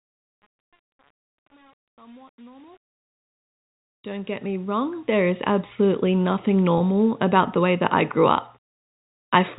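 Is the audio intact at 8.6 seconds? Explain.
Yes, at 8.6 seconds the sound plays through cleanly, with no dropout, click or other fault to be heard at that moment.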